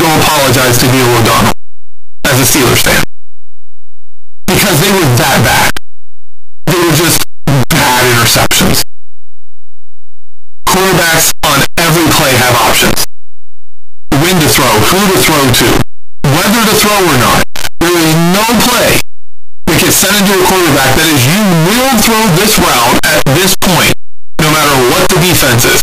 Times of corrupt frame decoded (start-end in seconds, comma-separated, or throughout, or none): none